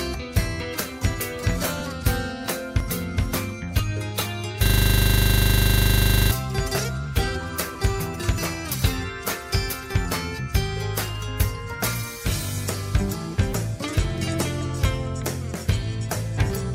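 At 2.80 s the audio skips forward by about 10 ms, leaving a small jump in the waveform. This is an overlap between stream segments. The audio arrives in one-second segments, and at this joint two of them carried time stamps that overlapped. The player discarded the overlapping stretch as if it were duplicated, although that audio was unique, so a sliver of sound is lost.

From 4.66 s to 6.31 s a single 40 ms piece of audio repeats exactly, 41 times over, producing a rapid stutter at 25 Hz that lies between a buzz and a machine-gun rattle. This is a system hang loop. The computer or driver stalled, while the sound hardware kept cycling through the same short ring buffer, replaying its contents until the system recovered.

The same overlap fault returns twice more. At 7.75 s about 10 ms vanishes, and at 9.73 s about 5 ms. Each is the same tiny skip at a segment joint, where the player trimmed away audio it mistook for a repeat.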